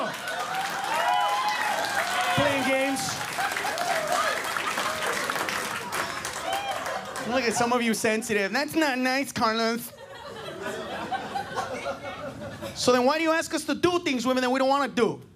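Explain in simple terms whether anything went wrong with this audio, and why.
Nothing stood out as going wrong when listening to this audio.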